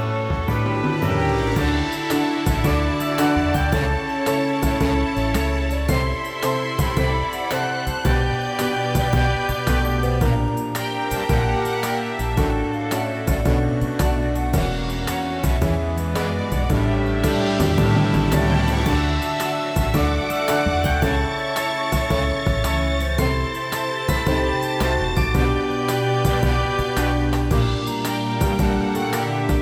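No technical faults are audible anywhere in this audio.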